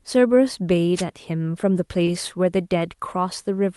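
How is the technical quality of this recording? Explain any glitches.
Two glitches stand out in this speech recording, both brief, heard over a call path whose audio tops out around 12 kHz, which fits an Opus call codec running in super-wideband mode.

Wireless microphone noise hit, 0.95 to 1.04 s: the FM radio link from the microphone faded as reflected signals cancelled, letting receiver noise rise over the voice. It comes through as a quick swish of static lasting under a tenth of a second.

Short concealed packet loss, 2.05 to 2.09 s: roughly 20 ms of audio failed to reach the decoder in time, so the receiver extended the preceding sound across the hole and then crossfaded back into real audio. The result is a brief smear or wobble.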